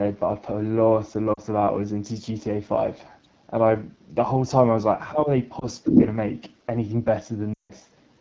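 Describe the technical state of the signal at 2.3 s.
At 2.3 s the speech carries AMR wideband (HD Voice) codec damage, present across the whole clip. The rough, raspy texture fits its low 8.85 kbit/s mode, with pulse-model coding below 6.4 kHz. A spectrogram shows smeared harmonics and diffuse noise fill from 6.4 to 7 kHz.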